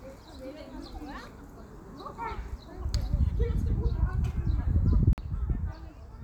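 From 5.13 to 5.18 s there's a 48 ms cut to silence, a Bluetooth stall, likely interference holding packets until the headphones' buffer ran dry.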